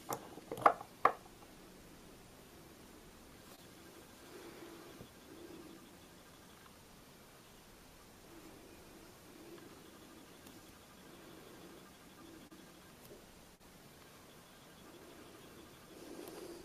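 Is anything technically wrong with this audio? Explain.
Yes. There is short concealed packet loss at 3.55–3.59 s, 12.47–12.52 s and 13.55–13.61 s. About 20, 20 and 40 ms of audio failed to arrive. Each time, the decoder extended the preceding sound to bridge the gap, then crossfaded back, leaving a brief smear or wobble.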